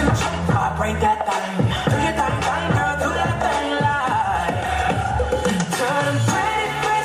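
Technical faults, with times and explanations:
No technical faults can be heard anywhere in the audio.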